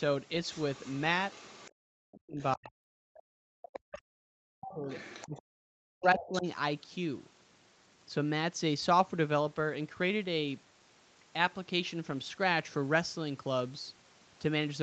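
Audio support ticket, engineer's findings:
Other side's voice leaking through at 0.45–1.01 s and 1.30–1.71 s: faint second talker under the main one, roughly 25 dB down. Likely residual loudspeaker echo the canceller didn't fully remove from the mic. Again at 4.67–5.42 s, louder, around 20 dB down, and 6.19–6.39 s, only about 15 dB down.

Speech suppressed in double talk at 1.93–2.80 s: main voice dips hard, around 40 dB at worst, for most of that stretch. Likely the canceller couldn't tell near talker from echo and ducked both. At 3.55–4.89 s, same dip, the longest hit. At 5.25–6.46 s, about a second pulled down, overlapping the leak at 4.67–5.42 s, which fits both sides talking at once.

Background gated by the echo canceller at 3.08–3.27 s: room tone drops out for roughly 150 ms, about 40 dB down, then snaps back. The canceller clamped the mic while the far end was playing and released once it went quiet. 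The whole band tops out near 8 kHz, which fits the call path's wideband Opus.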